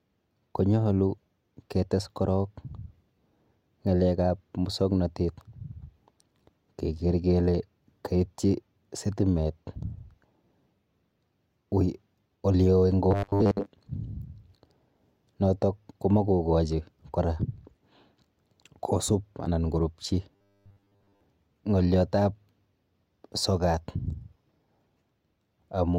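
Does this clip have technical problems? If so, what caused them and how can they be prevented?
Yes. Robotic sound from repeated short buffers occurs at 13.11–13.66 s and 20.36–21.21 s. The speech turns into a rigid, metallic 100 Hz buzz, likely because audio arrived too seldom and a 10 ms block was replayed over most of the real signal. Unlike dropouts, there is no silence, only a fixed-pitch drone that loosely tracks the speech. Steadier delivery and a larger jitter buffer prevent it.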